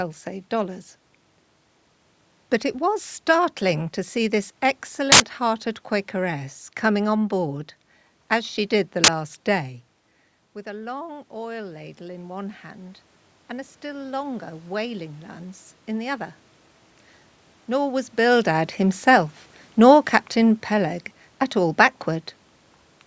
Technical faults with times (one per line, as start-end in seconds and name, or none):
5.12-5.20 uninitialised buffer
9.04-9.08 uninitialised buffer
10.63-16.40 automatic gain rising